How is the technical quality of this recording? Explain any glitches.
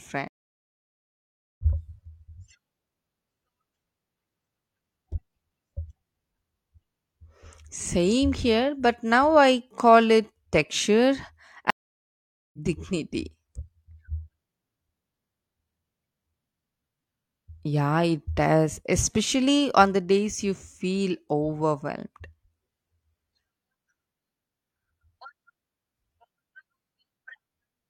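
The speech is broken twice by a stream reconnect. At 0.28 to 1.62 s the sound drops out for about 1.3 s. At 11.70 to 12.58 s, just after "I call it texture", it goes silent for about 0.8 s. The connection failed, playback stopped, and a new decoder picked up the live stream. The speech then resumes roughly 0.7 s further on than where it left off, so that stretch is skipped, not delayed.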